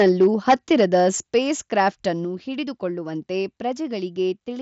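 A speech recording, carried over a Bluetooth mSBC headset link with nothing above about 7.7 kHz, shows microphone overload from 0.0 to 1.8 s, likely an input set about 8 dB too hot. Roughly 2% of samples are flattened against the converter's limit, seen as squared-off waveform peaks and heard as harsh crackle. The microphone volume is stepped down at 0.24 s by about 2 dB, at 1.23 s by about 5 dB, and at 2.25 s by about 4 dB, just before "ಹಿಡಿದು ಕೊಳ್ಳುವಂತೆ". This is likely automatic gain control reacting to the clipping, and each step shows as a sudden drop in the waveform envelope.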